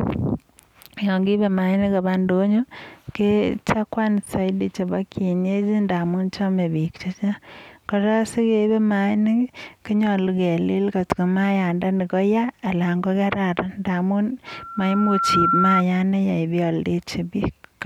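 Loudspeaker feedback squeal begins at 14.47 s, right after "kararan ndamun", and lasts until 15.83 s. The microphone picks up its own loudspeaker, and the loop gain exceeds one at 1.4 kHz. That tone swells over about a second to around 5 dB above the speech.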